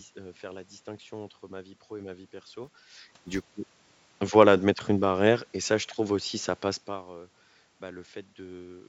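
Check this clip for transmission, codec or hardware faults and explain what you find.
One fault shows up, in a short stretch of the speech. From 2.64 to 3.44 s a buzz at about 345 Hz sits under the voice, rising and falling with its level. It is a filter restarted on every block: the filter drops its state and begins each block from silence, leaving a small transient each time, which fits a 128-sample block.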